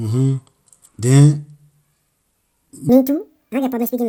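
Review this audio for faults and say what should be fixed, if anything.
The speech sounds dull throughout, with a gurgling, granular texture and upper frequencies dropping in and out. This is likely MP2 compression at too low a rate, consistent with about 80 kbps, where Layer II switches off whole upper sub-bands and quantises the rest coarsely. To prevent it, encode at a higher bitrate or use a more efficient codec.

From 2.89 s to the end at 4.09 s, the speech runs high and hurried, about 1.78 times too fast and raised by roughly ten semitones. This is a section at the wrong speed, where speed and pitch shift together as if that part were played against the wrong clock. To prevent it, check that every segment is edited and played back at its original sample rate.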